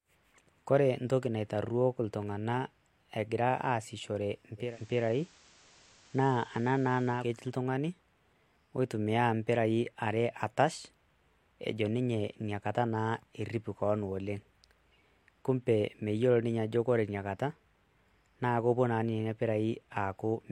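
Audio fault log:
4.57–7.32 s, digital radio blending to analogue: just after "egira aasishore" a faint hiss rises, some 30 dB below the voice, while the level shifts by about 1 dB. The hybrid receiver lost its digital stream and cross-faded over about 217 ms to the station's FM broadcast, whose noise floor accounts for the change, then blended back to digital at the end.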